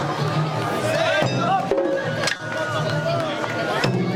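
Short concealed packet loss occurs from 2.36 to 2.40 s. About 30 ms of audio failed to reach the decoder in time, and the receiver bridged the gap by extending the preceding sound before blending back into the real signal, leaving a brief smear or wobble.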